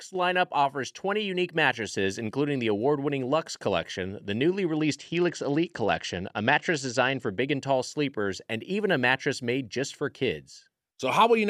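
From 4.78 to 7.29 s, a Bluetooth SBC bit pool drop dulls the speech's treble and adds gritty noise, consistent with bit pool falling from 31 to about 11 under congestion.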